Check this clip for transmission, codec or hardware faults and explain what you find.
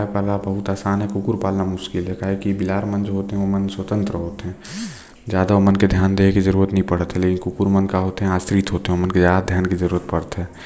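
No transmission, codec or hardware fault can be heard anywhere in this speech recording.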